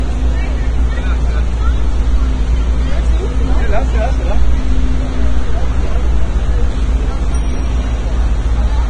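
Throughout the clip, nothing is present above 9.7 kHz, and the remaining treble turns hissy and grainy, with roughened tones and smeared attacks. This is likely heavy Vorbis compression at a bitrate near 23 kbps. Unlike a plain low-pass filter, it also replaces fine detail with noise.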